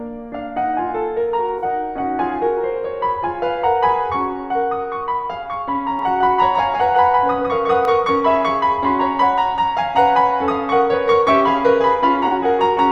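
Music, with two brief AAC frame losses with concealment at about 1.58 s and 12.27 s, each roughly 43 ms, which fits two lost frames; these sound smeared and phasey rather than silent, unlike a plain dropout. From 5.99 s to 7.85 s a doubled audio track trails the music by around 150 ms at about 5 dB lower, likely from a second, slower capture path. Unlike a room echo, it has no decay and starts and stops abruptly.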